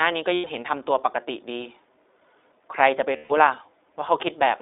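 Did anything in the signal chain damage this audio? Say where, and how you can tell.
Yes. At the codec stage, it's iLBC throughout: the sound is confined to roughly 300 Hz to 3.7 kHz, with a plainly rough, synthetic edge from its frame-by-frame excitation coding.

Over the network, there are lost iLBC frames at 0.34–0.46 s (100 ms) and 3.16–3.32 s (140 ms). The decoder fills each gap with a repeated pitch cycle plus noise, heard as a held, buzzy vowel.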